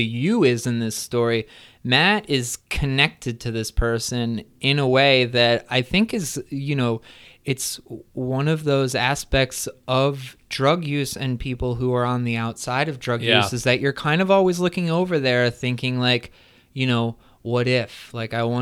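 No technical faults can be heard in this speech recording.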